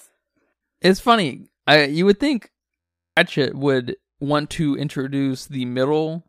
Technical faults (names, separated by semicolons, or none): system hang loop